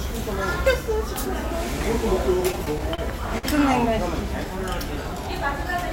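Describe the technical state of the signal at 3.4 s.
At 3.38 to 3.46 s there's a short stall from a late packet: the jitter buffer ran dry, so the receiver stretched the last bit of sound for about 53 ms until the packet arrived. Nothing's lost, but that moment hangs, with a faint buzzy smear, and everything after runs 53 ms late.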